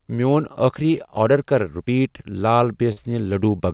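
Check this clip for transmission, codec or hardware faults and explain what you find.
One transmission fault is present, in speech that passes through a call path band-limited at 4 kHz, consistent with G.711 A-law.

Burst of packet loss, 2.92 to 2.99 s: a run of consecutive packets arrived too late or not at all. The receiver prolonged the last received sound for about 46 ms, fading it down, then jumped ahead, so roughly 40 ms of speech is simply gone when playback resumes.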